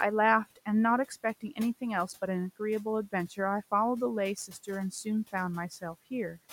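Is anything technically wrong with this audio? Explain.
Yes. From 4.36 to 4.68 s, the noise suppressor cut speech. It mistook quiet speech for noise and pulled it down by about 11 dB for about a tenth of a second, so sounds seem swallowed. The room noise sits about 22 dB below the speech.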